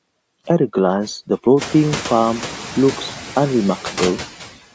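Throughout the speech, a noise suppressor cuts what it judges steady noise by about 8 dB, so the residue sinks and swells around the voice, including after room noise rises near 1.5 s.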